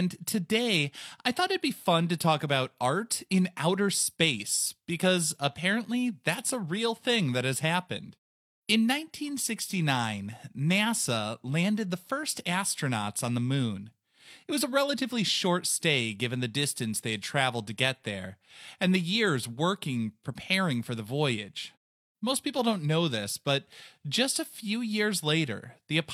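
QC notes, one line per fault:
No faults found in this speech clip. In the pauses the background fades to silence and comes back in time for the next phrase, with no speech lost.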